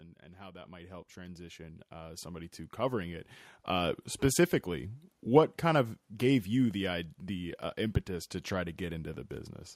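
Speech, and it has automatic gain rising twice: from 0.36 to 3.11 s the level climbs by about 11 dB, then again from 3.67 to 5.01 s by about 3 dB. The AGC is pushing its gain up, so the voice and background noise swell together.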